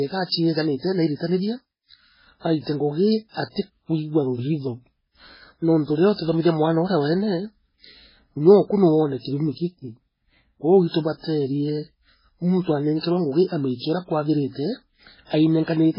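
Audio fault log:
Throughout, MP3 compression. Nothing is heard above 5.3 kHz, so the treble stops dead at a fixed edge. The speech sounds watery and swirly, with metallic chirps on s sounds. Consonant attacks are smeared. The damage is heavy. This is likely an MP3 encoder starved of bits, which fits a rate near 16 kbps. It cut the top band and kept zeroing weak frequency lines, so they flicker on and off between frames.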